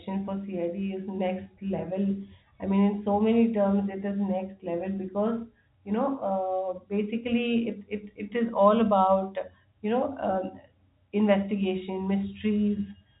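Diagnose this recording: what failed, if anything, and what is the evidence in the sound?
Nothing failed: the speech shows only the narrow telephone band expected of G.711 coding, with nothing above 3.8 kHz.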